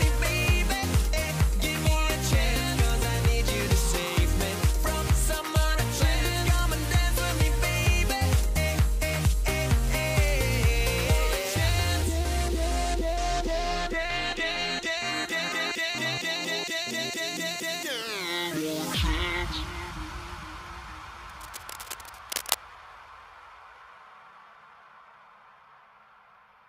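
From 21.28 to 22.55 s, a burst of cable scratch noise sits over the sound, roughly 10 dB below it: dense, uneven crackling and rustling. It is likely a worn cable, connector or control being moved, its contact resistance fluctuating rapidly.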